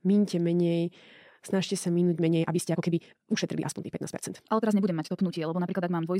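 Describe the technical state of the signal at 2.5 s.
At 2.5 s the speech sits inside a time-stretched section running from 2.16 s to the end of the clip, just after "minte menej snažte sa". Software likely squeezed this part to about 1.74 times normal speed, keeping the pitch by discarding short slices of the waveform. As a result, the pace jumps abruptly faster while the pitch stays put, and the speech comes across rushed.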